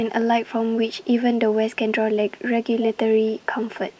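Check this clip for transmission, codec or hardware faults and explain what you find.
There is one fault, an echo leak, heard twice near the end. Likely an echo canceller on a speakerphone end failed to fully suppress what its microphone picked back up, so the speech returned about 276 ms late. From 3.26 to 3.46 s and from 3.74 s to the end, a faint, delayed copy trails the speech, some 20 to 25 dB below it, within the call's normal 8 kHz band.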